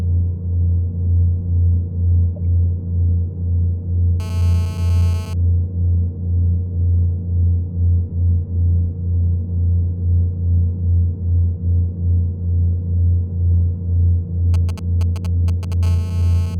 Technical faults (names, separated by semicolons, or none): GSM phone buzz; GSM signalling bursts